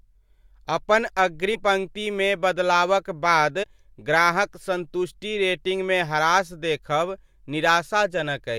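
At 1.54 to 1.56 s, just before "पंक्तिमे बदलावक बाद ग्राहक", compressed frames are skipped. The speech jumps ahead by about a tenth of a second. At 3.62 to 3.64 s, after "पंक्तिमे बदलावक बाद", a few more frames vanish, about 70 ms.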